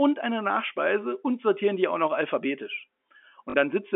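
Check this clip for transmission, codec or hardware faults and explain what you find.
One transmission fault is audible in the speech, a short burst of packet loss near the end, heard through a G.711 telephone path whose 250 Hz to 3.5 kHz band sounds as expected.

From 3.50 to 3.54 s, packet loss with the last packet repeated fills a 40 ms gap, which fits two lost 20 ms packets. The receiver replays the last good packet in place of the missing audio, and the brief run comes across as a robotic stutter.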